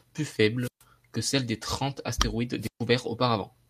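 Wireless microphone squelch dropout at 0.59–0.83 s and 2.60–2.81 s: the speech's radio link fades, hiss rises, then the receiver mutes for about 130 ms each time.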